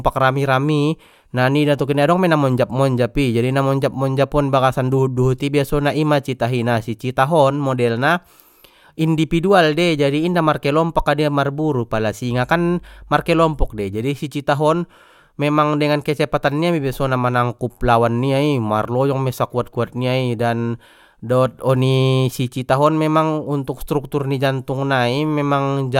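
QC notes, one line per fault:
12.26–13.86 s, mains hum: a steady low 50 Hz tone sits under the speech for about 1.6 seconds, roughly 25 dB below it, as power-line current leaks into the signal path through a ground loop or a nearby transformer.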